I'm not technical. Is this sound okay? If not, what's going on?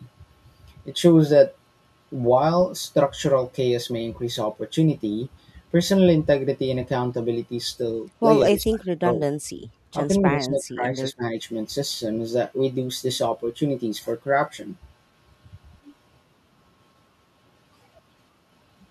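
No. This speech clip shows speech suppressed in double talk. Both sides were likely talking at once, and the echo-cancelling part of the call system couldn't tell the talker apart from the other side's voice coming through the speaker, so it turned the talker down. You hear the voice sink sharply or drop out in pieces from 8.51 to 9.19 s, in a brief gap at 9.79 to 9.84 s, and again more gently from 10.22 to 11.24 s.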